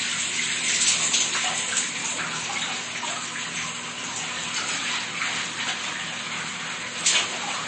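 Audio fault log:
Throughout, MP3 compression: nothing is present above 8.3 kHz, and the remaining band carries plainly audible coding damage, which fits a low bitrate of around 32 kbps, the likely cause. Short of bits, the encoder drops the treble at a fixed edge and zeroes weak frequency lines, so the detail flickers from frame to frame. That flickering texture sets it apart from a plain low-pass filter, which would dull the top without roughening what remains.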